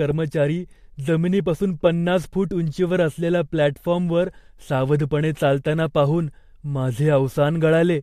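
No technical faults are audible.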